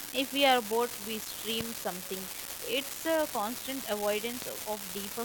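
A steady crackle runs through the whole clip, speech and pauses alike. This is an unreliable data bit. One marginal data line flips its bit at random. Each error adds a spike of the same size, about -20 dBFS, so the fizz never stops.

At 1.61 to 1.63 s, just after "we are bored we", a loud pop cuts in. A second pop comes at 4.42 to 4.44 s. Each is a single sharp crack, far louder than the speech, which carries on underneath. The likely cause is a sudden voltage pulse, such as a switch, static or a driver glitch.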